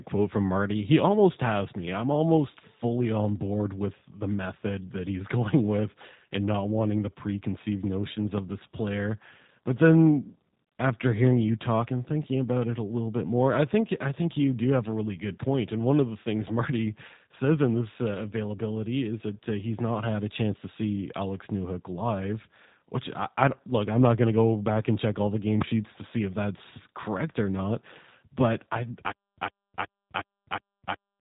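The whole recording has the G.729 codec sound: everything stops at about 3.8 kHz, so the speech is dull and boxed-in, with a rough, slightly synthetic edge. The codec isn't keeping the actual waveform. It rebuilds each short frame from a vocal-tract filter, a pitch guess and a handful of pulses, and that rebuild is where the grit comes from. The damage is easy to hear throughout, which fits a G.729-style 8 kbit/s VoIP path.

At 8.38 to 8.40 s, right after "wanting the preconceived notions" and just before "this player", there's a loud pop. It's a single sharp crack, somewhere around 15 dB above the speech, and the talking carries on under it. A second pop lands at 25.62 to 25.64 s, between "check all the game" and "to see if that's", and it's louder, roughly 20 dB up. Both sound like a voltage spike getting into the chain, likely from a switch, a plug or static discharge, with the downstream circuitry shaping it into a short click.

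From 29.12 s to the very end there's a stutter with silent gaps. A 106 ms fragment plays, then about 260 ms of dead digital silence follows, and the cycle repeats every 365 ms, five times over. That's the signature of a player that likely stalled, replayed its last buffer on each retry and then ran dry. Whatever should have come after is gone.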